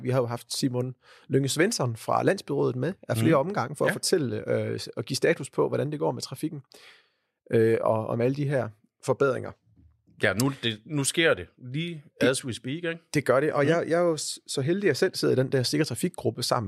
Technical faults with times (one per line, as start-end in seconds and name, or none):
1.49 dropped samples
11.88 dropped samples